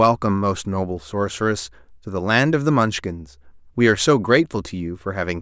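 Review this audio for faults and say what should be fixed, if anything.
There are no faults in this audio, so nothing needs to be fixed.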